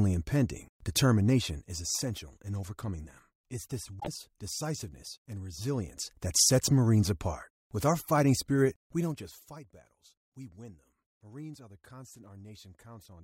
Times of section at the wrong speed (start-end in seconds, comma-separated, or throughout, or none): none